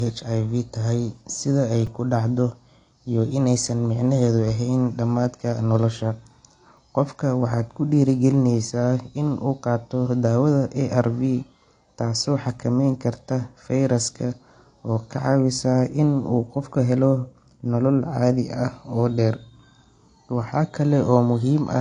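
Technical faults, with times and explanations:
Throughout: the speech sounds dull and smeared, with nothing above 9.8 kHz and plainly audible codec damage. The likely cause is AAC compression at a low bitrate, consistent with roughly 32 kbps AAC-LC. At that rate the encoder spends too few bits on each frame of frequency lines, so it drops the top of the spectrum, leaves gaps, and gives sibilants and sustained sounds a fizzy, warbling texture.
1.87 s and 6.77 s, repeated buffer: at each moment a very short slice of audio plays again with hard joins, heard as a tiny click or buzz rather than a clear stutter. The slice lasts about 5.33 ms, which fits a 256-sample buffer. It repeats twice extra at 1.87 s and once extra at 6.77 s. Fresh audio reached the output late, so the device replayed its last buffer. Essentially nothing is skipped afterwards.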